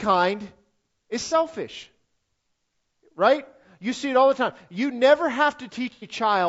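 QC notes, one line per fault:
Throughout: low-delay AAC compression, likely AAC-ELD at a rate around 32 kbps. The speech sounds rough and grainy. Short coding frames resolve pitch harmonics poorly, so noise fills the gaps between them. The top band sounds thin and synthetic.
1.25–1.34 s and 5.93–6.07 s: AAC frame loss with concealment. The decoder lost audio, about 60 ms and then 90 ms. It filled each gap from the last good spectrum, so each patch sounds smeared, noisy or phasey, not silent.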